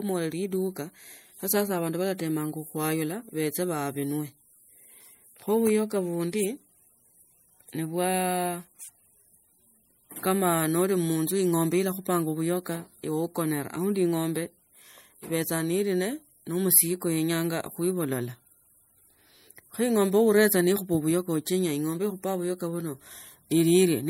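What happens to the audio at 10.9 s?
MP3 compression is audible at 10.9 s, as it is across the whole speech clip. The damage is plain: the sound has a watery, swirling texture, with metallic chirps on s sounds. The likely cause is an MP3 encoder starved of bits, which fits a rate around 64 kbps. It drops weak frequency components, which flicker in and out between frames and smear consonant attacks.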